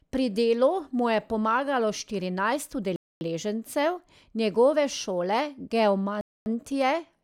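Hard-edged holes of silence interrupt the speech twice: from 2.96 to 3.21 s and again from 6.21 to 6.46 s, each a quarter of a second long and cutting in and out abruptly. This is a gap between chunks. The audio was delivered in 3-second pieces, and silence was inserted at each join rather than the pieces playing back to back. Nothing is missing, but the flow breaks at every boundary.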